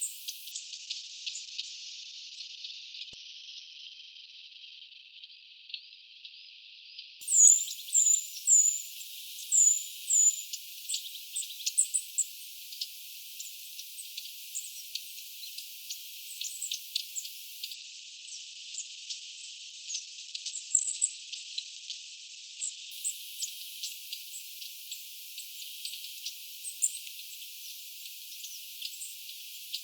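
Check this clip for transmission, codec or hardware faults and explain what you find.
Two call bitrate drops are audible. From 0.52 to 8.77 s and again from 17.75 to 22.97 s, the encoder is starved of bits after the bandwidth estimate falls. Coarser coding makes the sound rough and watery, and the top band is cut to 6 kHz, then 8 kHz. That fits a fall from around 40 kbps to roughly 8 to 10 kbps, with the lowest stretches lasting about 4.2 s and 5.2 s. On a spectrogram, the energy above those cut-offs disappears abruptly.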